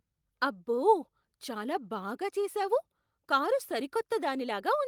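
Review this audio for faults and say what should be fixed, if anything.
Nothing in this recording needs fixing. No faults can be heard at any point in the speech.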